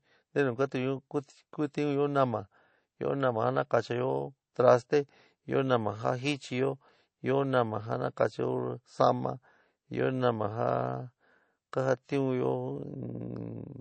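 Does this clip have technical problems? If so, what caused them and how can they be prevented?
Yes. All through the speech the sound is watery and swirly, s sounds take on a metallic chirp, consonant attacks smear, and there is nothing above 8.3 kHz. The likely cause is MP3 compression at a low bitrate, about 32 kbps. With too few bits, the encoder removed all treble above a fixed cut-off and discarded weak frequency lines, which then flicker on and off from frame to frame. Encoding at a higher bitrate, or storing a lossless copy instead, would prevent this.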